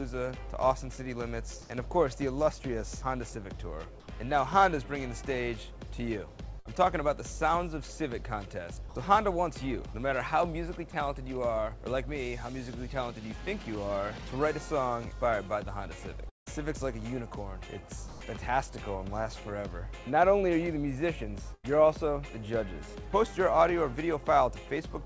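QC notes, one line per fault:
1.62 to 1.70 s and 4.00 to 4.08 s, comfort noise in place of the background: for about 80 ms each time the real background gives way to a steady, featureless hiss, slightly louder (about 2 dB) at the first and about 3 dB quieter at the second. This is likely discontinuous transmission, with synthetic noise standing in for a background only about 21 to 23 dB below the loud parts. Nothing that matters is lost, which sets it apart from a voice-detector drop.
6.60 to 6.67 s and 21.54 to 21.65 s, burst of packet loss: the last sound is held and fades, for about 53 ms and then about 91 ms. The audio then resumes having skipped about 60 ms and 100 ms. The fading concealment tail and the short gap set it apart from a long dropout.
8.89 s to 8.95 s and 18.08 s to 18.20 s, sound dropped by the voice detector: 60 ms and then 120 ms of actual sound are replaced by steady comfort noise, and the sound returns once detection resumes. 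This is likely the sender judging quiet sound as background. Unlike plain comfort noise, real content disappears here, and unlike packet loss there is no held buzz leading into it.
16.29 to 16.48 s, long network dropout: the sound is stretched into a fading tail for about 170 ms, and roughly 160 ms of that ends in silence, with about 180 ms of audio gone. This is likely a stall in delivery. The long silent stretch after the fade separates it from a brief loss burst.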